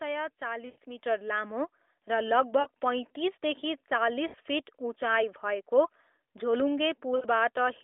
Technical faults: lost AMR speech frames; microphone volume stepped up

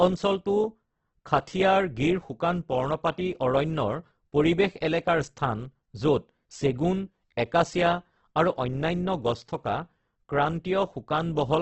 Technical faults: Opus compression

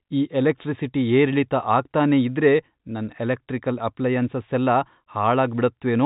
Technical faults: none

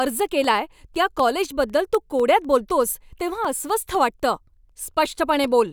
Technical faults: periodic USB or driver dropouts

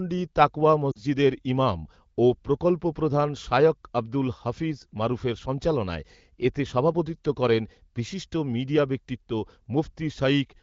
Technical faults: lost AMR speech frames

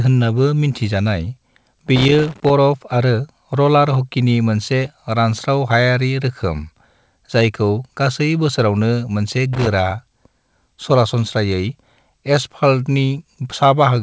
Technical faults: loose connector crackle

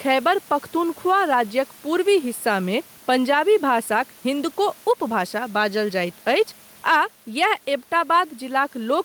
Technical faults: gain pumping

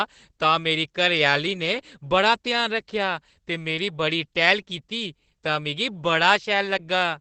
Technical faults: Opus voice compression

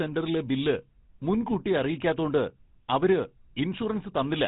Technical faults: GSM full-rate codec

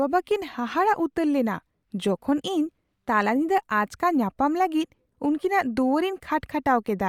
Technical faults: Bluetooth LC3 compression

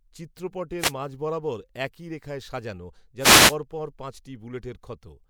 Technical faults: wireless microphone noise hit

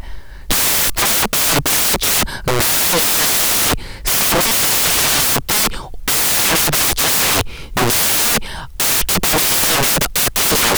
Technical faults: samples built from the wrong bytes

